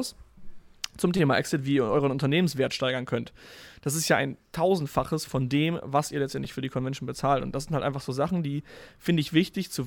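Speech with two repeated-buffer faults: a buzzy stutter at 1.17–1.19 s, where a roughly 5 ms slice plays four extra times, and a shorter one at 6.45 s with two extra plays. Unlike a dropout, no audio goes missing. The same slice is replayed with hard joins.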